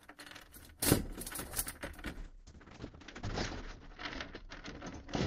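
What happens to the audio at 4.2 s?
At 4.2 s the sound is inside a call bitrate drop running from 2.2 s to the end. The encoder's budget falls from 48 to 8 kbps for about 1.8 s at its lowest, so coding turns coarse and watery, and the top end is cut from 20 kHz to 8 kHz, leaving everything muffled.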